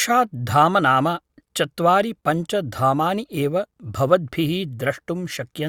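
No technical faults are audible in this speech recording.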